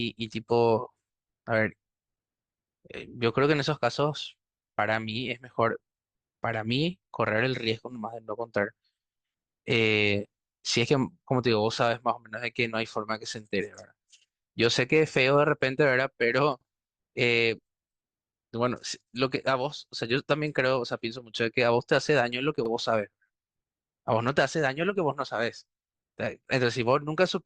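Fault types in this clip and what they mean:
Overlapping chunks: 6-second blocks each restart 44 ms early, so speech briefly repeats as a stutter; waveforms show a duplicated slice, spectrograms a vertical seam.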